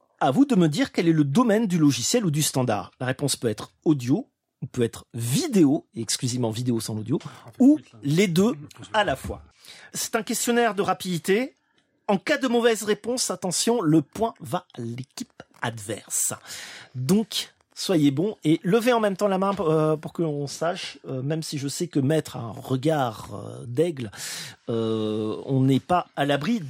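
Nothing stood out on listening to this recording.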